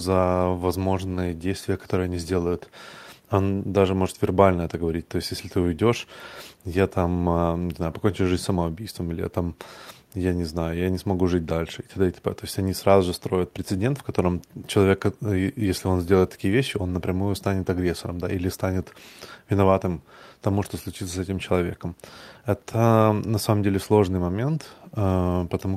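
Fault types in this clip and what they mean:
No technical faults can be heard anywhere in the speech. There is nothing to list for any fault type.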